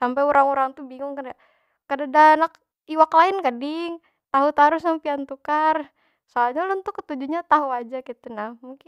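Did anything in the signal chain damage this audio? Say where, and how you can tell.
No, nothing in the signal chain damaged this audio.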